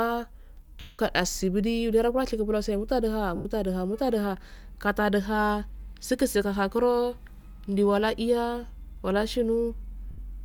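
A noisy, fading smear replaces the speech at 0.80 to 0.99 s, 3.36 to 3.45 s and 10.11 to 10.18 s. These are lost LE Audio frames: the LC3 decoder fills each gap by reusing the last spectrum with random signs.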